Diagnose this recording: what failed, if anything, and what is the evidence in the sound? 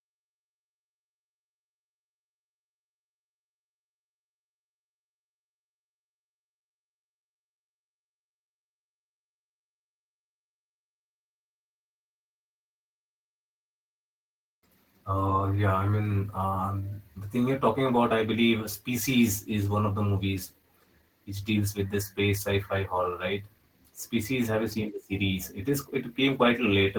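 Jitter buffer speed-up, 12.93 to 15.18 s, just before "yeah I mean": the network-side buffer trimmed repeated pitch periods, about 150 ms in all, so speech runs 6% faster at unchanged pitch.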